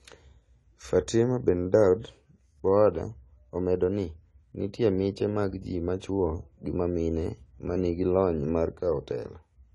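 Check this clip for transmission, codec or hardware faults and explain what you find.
One codec fault is present, running through the whole speech recording.

AAC compression, throughout: the audio was likely encoded with AAC-LC at a low bitrate, with a damage level consistent with about 32 kbps. To save bits, the encoder discards everything above a cut-off and quantises the remaining spectral lines coarsely against its hearing model. Nothing is heard above 11.5 kHz, so the speech sounds dull and lacks air, and the coarse quantisation leaves a plainly audible smeared, warbling texture on the voice.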